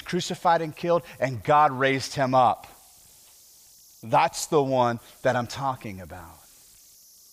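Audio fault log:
Throughout: converter idle tones. A faint whistle near 5 kHz sits in pauses, about 32 dB below the speech. An undithered delta-sigma converter loops repeating bit patterns on quiet input.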